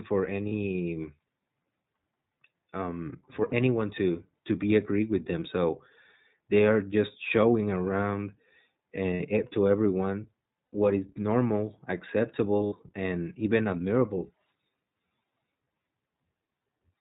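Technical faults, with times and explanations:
Throughout: iLBC codec. The speech is band-limited to nothing above 4 kHz and coded in 20 ms frames at a rate that fits 15.2 kbps. Each frame's excitation is coded independently, which leaves plainly audible roughness and a slightly synthetic texture on the voice.
0.48–0.53 s, 3.50–3.54 s, 5.40–5.43 s, 9.14–9.21 s, 10.75 s, 12.66–12.74 s: lost iLBC frames. Gaps of 20 to 60 ms, the longest near 9.14 s and 12.66 s, are concealed by repeating the last pitch cycle blended with noise. Each gap sounds like a brief held, buzzy vowel, and the voice is right again almost at once afterwards.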